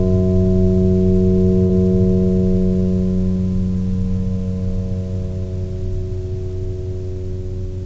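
At 1.67 to 1.72 s the music briefly smears and wobbles: a short concealed packet loss. About 30 ms of audio never arrived in time, and the receiver covered roughly 25 ms of the gap by extending the preceding sound before crossfading back into the real signal. On a spectrogram the partials run on as flattened, slightly blurred bands; the waveform shows a repetitive stretch before it blends back. Throughout, nothing appears above 8 kHz, which fits a G.722 call path.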